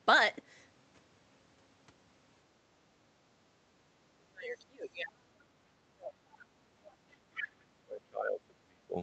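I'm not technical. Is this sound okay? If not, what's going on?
No, there are three problems, all from the call's echo canceller, the part that stops a caller's own loudspeaker from being picked up by the microphone.

Background gated by the echo canceller, 3.48 to 3.58 s: for about a tenth of a second the room sound dips noticeably and then comes back. The echo canceller heard the loudspeaker playing and briefly turned the microphone down to be safe, taking the quiet background with it.

Speech suppressed in double talk, 4.14 to 6.36 s and again 7.12 to 8.97 s: the talker's speech sinks very low, at times almost vanishing, for roughly two seconds in the first stretch and a second and a half in the second. This is likely because both sides were talking at once, and the echo canceller couldn't tell the talker apart from the loudspeaker's echo, so it turned everything down together.

Other side's voice leaking through, 6.87 to 6.92 s and 7.39 to 7.43 s: two brief scraps of a second voice slip in, the first faint, the second nearly as loud as the talker. 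These are likely bits of the other caller coming out of the loudspeaker that the echo canceller failed to remove before the microphone sent them on.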